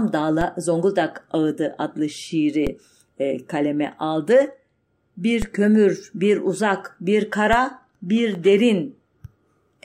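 A low thump lands at 0.41 s, again at 2.67 s just before "e kaleme aldı", at 5.42 s just before "kömür bir uzak bir", and at 7.53 s right after that same phrase. Each is a DC step: the waveform's zero line jumps abruptly, by about -14 dBFS for the first two and about -12 dBFS for the last two. The offset then bleeds away through a 20 Hz high-pass, while the speech itself carries on unchanged.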